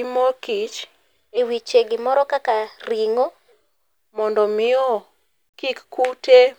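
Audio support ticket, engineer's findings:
Section at the wrong speed, 1.37 to 3.52 s. Likely playback or edit clocked about 1.12x fast for that span. Speech turns hurried and rises roughly two semitones, then drops back abruptly to normal pace and pitch at 3.52 s.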